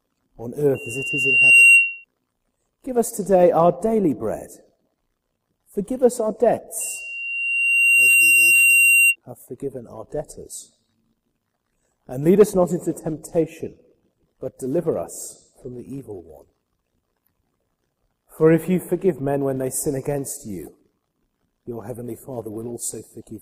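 A loudspeaker feedback squeal from the microphone picking up its own speaker swells at 2.8 kHz from 0.75 to 2.05 s, then again, building more slowly, from 6.80 to 9.16 s, about 10 dB above the sound.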